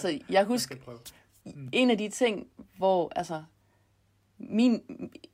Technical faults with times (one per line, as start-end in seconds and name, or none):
1.68 block of digital silence
2.80 block of digital silence